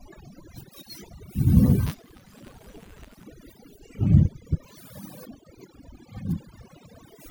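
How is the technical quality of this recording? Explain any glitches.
The technical quality is poor, with two distinct faults.

Overdone noise removal runs through the whole clip. A noise reduction setting far too strong pulls individual frequency bands down whenever they sit near its noise estimate, taking quiet parts of the speech too. The background becomes near silence with twinkling specks. A spectrogram would show isolated dots scattered over an empty floor and ragged, gappy upper harmonics.

Buffer tearing appears from 1.86 to 3.24 s. The writer and reader of a ring buffer have slipped, so each period holds a small sliver of audio from roughly ten milliseconds earlier, joined hard on both sides. It produces a robotic buzz at 188 Hz, which fits a 256-sample buffer, audible only while speech is present. The waveform would show regularly spaced discontinuities, and the spectrogram would show vertical streaks at that rate.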